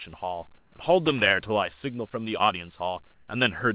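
From 0.58 to 0.72 s, the background changes to a smooth, featureless hiss, about 3 dB quieter, and the real background returns after 140 ms. The same swap happens from 3.14 to 3.28 s, about 2 dB quieter. This is likely comfort noise in place of the background. A voice detector halted transmission, and the receiver filled the gap with synthetic noise.

From 1.06 to 1.31 s, an irregular burst of scratchy crackle cuts through the sound. This is loose connector crackle. A worn or dirty contact kept making and breaking, chopping the signal. The call audio carries nothing above 4 kHz.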